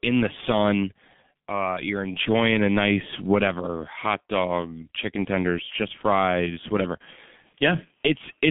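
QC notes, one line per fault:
throughout, G.723.1 codec: The signal went through a low-rate telephony coder running at 6.3 kbit/s on a line passing only about 150 Hz to 3.5 kHz, and the coding damage is heavy. With nothing above 3.5 kHz and a voice model refreshed only once per 30 ms frame, the speech sounds muffled and rough, with a hoarse grain on vowels and consonants smeared together so that sibilants and stops lose their edges.
7.51 s, VoIP packet loss concealed by the speech codec: Right after "tenders just fries whatever", about 30 ms of audio never arrived, which fits a single lost frame. The decoder filled the gap by repeating its last pitch and filter settings at falling gain, producing a brief buzzy tone or coloured noise instead of real speech. Because each decoded frame depends on the one before it, the voice sounds weak or distorted for tens of milliseconds after audio resumes.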